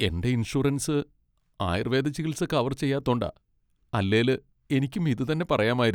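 A short speech recording, with no technical faults audible anywhere in it. Nothing in the audio stands out as a problem at any point.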